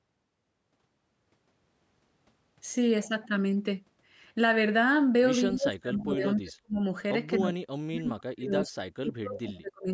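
From 5.52 to 6.85 s the speech dips in pieces, by about 30 dB at worst and for about a second in total. The likely cause is speech suppressed in double talk: with both ends talking, the echo canceller cut the near talker along with the echo. Unlike a network dropout, the losses follow the overlap rather than falling at random. Inside that stretch, from 5.99 to 6.03 s, a brief, faint scrap about 20 dB down repeats the sound 248 ms late. That delay identifies it as an echo leak, likely from a loudspeaker whose residue the canceller let through, and not as reverberation, which would smear continuously. From 7.39 to 9.9 s the suppression returns more deeply, with drops of up to about 40 dB covering roughly two seconds. Throughout the clip, the call processing's band limit leaves nothing above 8 kHz.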